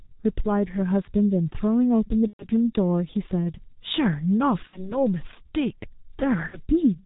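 Throughout, the speech carries heavy G.723.1 codec damage. Nothing above 4 kHz survives. The slow voice model and 30 ms frames leave the voice muffled and hoarse, with smeared consonants. The sound fits a bitrate near 6.3 kbit/s.

VoIP packet loss concealed by the speech codec appears at 2.27 to 2.47 s, 4.67 to 5.02 s and 6.47 to 6.60 s. The decoder repeats its last pitch and filter at falling gain. Each gap becomes a fading buzz or coloured noise. The voice stays weak briefly afterwards. The first gap fits about 120 ms lost.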